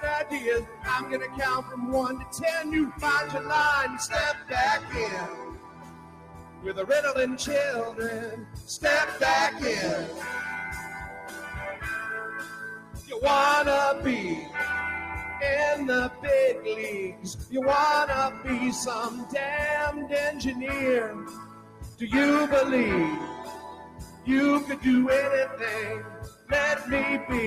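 A noise suppressor applied to music or sounds runs throughout. A speech-tuned suppressor treats sustained tones and tails as noise, so level swings by roughly 15 dB and the sound pumps. A waveform shows the envelope breathing, with sustained regions collapsing while attacks survive.

Sound cut by the noise suppressor occurs at 0.63–3.0 s (down about 9 dB), 4.39–6.82 s (about 13 dB), 8.28–13.11 s (about 12 dB, the longest), 16.09–19.34 s, 20.32–22.01 s and 23.48–26.51 s (each about 12 dB). Held sounds sink and decays are chopped short. A spectrogram shows horizontal partials thinning or vanishing while vertical transient lines stay intact.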